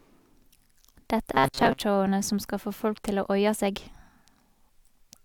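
From 1.34 s to 1.8 s the speech collapses into a rigid, metallic buzz pitched at 134 Hz, still loosely tracking the shape of the words. This is robotic sound from repeated short buffers. Fresh audio is most likely arriving too seldom, so the playback keeps re-sending the last short chunk for most of that stretch while the real signal is skipped. A repeat every 7.5 ms or so would force that steady 134 Hz tone.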